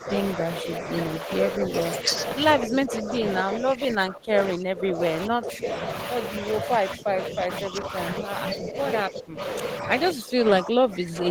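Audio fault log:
0.0–2.1 s, 2.58–5.69 s, 6.39–9.4 s, 9.82–11.3 s: speech suppressed in double talk. The speech repeatedly dips, thins and breaks up. The drops range from about 5 dB at first to about 20 dB later. The likely cause is an echo canceller ducking the talker while the far side spoke.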